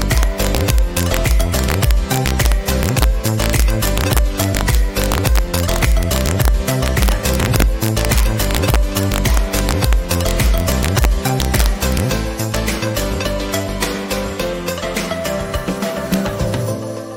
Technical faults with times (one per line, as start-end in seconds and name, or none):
0.00-17.16 integer overflow